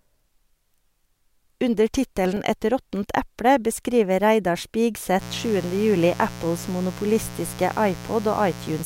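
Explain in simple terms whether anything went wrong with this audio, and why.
From 2.02 to 2.48 s, five tiny clicks break the speech. These are CD scratch ticks: a scratch on the disc erased data the player couldn't repair.

From 5.18 s to the end, a steady, raspy buzz sits under the speech. This is mains buzz, interference from the 60 Hz power supply leaking in.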